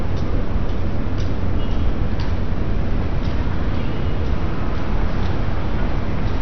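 From start to finish the sound is dull and gurgly, with nothing above about 6.2 kHz and a granular, watery texture in what's left. That's heavy damage of the kind you get from MP2 compression, likely at a low rate, something like 48 kbps. With that few bits to share out, the encoder shuts off the upper sub-bands entirely and quantises the remaining ones coarsely, so bands flicker in and out and everything turns mushy.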